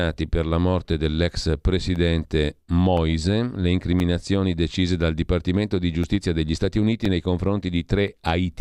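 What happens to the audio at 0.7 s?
Nothing goes wrong at 0.7 s; the speech there is intact.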